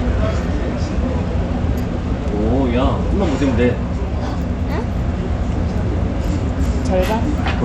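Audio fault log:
Throughout, Bluetooth SBC compression: the top end thins out and flickers, with a gritty grain and some aliasing riding on everything. This is likely SBC starving its upper sub-bands of bits and coarsely quantising the rest, which fits a tight bitrate around 96 kbps.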